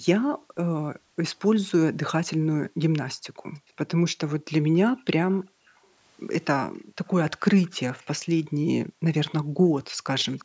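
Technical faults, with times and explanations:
0.0–1.22 s, 2.37–3.74 s, 4.9–5.93 s, 6.79–6.97 s, 8.43–10.06 s: background gated by the echo canceller. The room sound falls away in these stretches, by about 40 dB at its deepest. Each dip then lifts again. The gaps add up to roughly a second in the first and last spans, under a second in the second and third, and only a brief moment at 6.8 s. The canceller was clamping the microphone while the far-end loudspeaker played, so the background drops out and returns once it releases.
5.32–5.43 s, 7.62–8.05 s, 10.19–10.44 s: echo leak. A faint, delayed copy of the speech trails in. It arrives about 0.35 s behind the original and sits about 30 dB below it, rising to about 25 dB below in the last span. The copy comes in scraps, not as a steady repeat. The likely cause is a loudspeaker-playing side whose echo canceller let some of its microphone pickup through and send it back.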